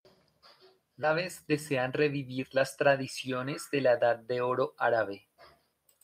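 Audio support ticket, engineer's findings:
Skip ahead, 1.03–1.05 s: roughly 0.4 s of speech dropped by jitter buffer or in transit. Waveform shows hard splice, no gap. Spectrogram shows abrupt formant discontinuity.

Jitter buffer speed-up, 1.47–3.02 s: buffer over target, so pitch-period chunks removed repeatedly. Playback about 6% fast, same pitch, about a tenth of a second trimmed. Spectrogram shows compressed syllable spacing, unchanged harmonic spacing.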